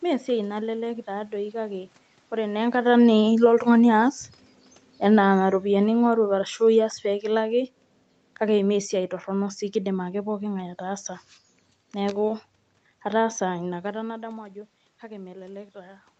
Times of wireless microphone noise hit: none

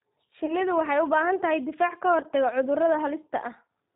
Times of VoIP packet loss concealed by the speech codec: 0.46-0.54, 2.21-2.26

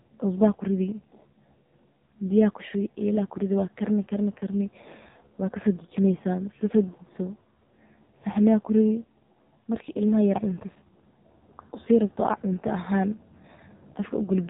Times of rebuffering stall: none

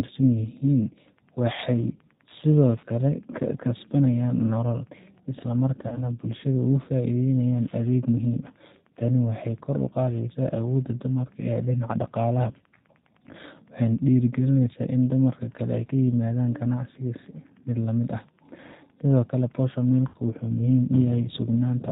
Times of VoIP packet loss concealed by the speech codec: 5.88-6.00, 20.08-20.17

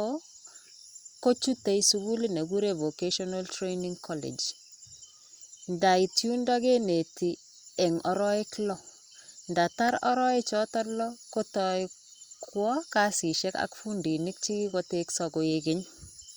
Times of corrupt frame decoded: none

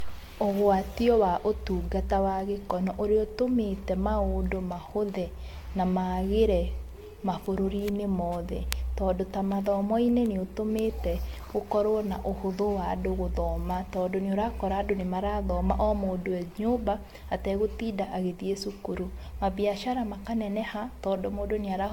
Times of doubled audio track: none

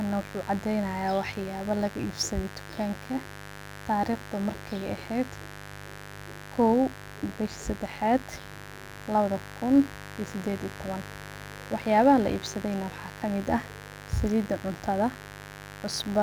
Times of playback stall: none

